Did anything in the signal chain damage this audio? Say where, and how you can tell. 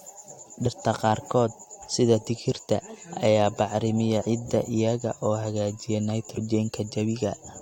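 Yes, at the codec stage: compressed frames skipped around 0.65, 1.81, 4.21 and 6.36 s. The speech lurches forward by roughly 20 to 70 ms each time, because whole frames are left out and playback jumps ahead by their length.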